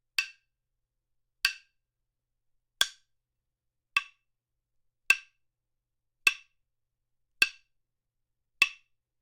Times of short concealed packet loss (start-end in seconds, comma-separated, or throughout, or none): none